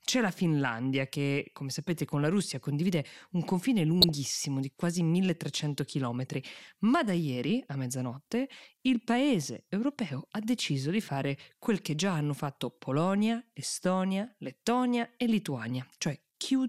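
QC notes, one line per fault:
4.01–4.09 s and 7.59–7.73 s, DAB burbling: under weak reception, bit errors slipped past the error correction into the MP2 audio data. The corrupted samples put short blips of noise into individual sub-bands, heard as a watery, bubbling disturbance, first after "condivide un confine" before "di quasi", then after "ma da" before "mezzanotte il". The 78 ms and 144 ms spans fit a handful of damaged frames each, at a bit error rate of roughly 0.2 and 0.1 percent respectively.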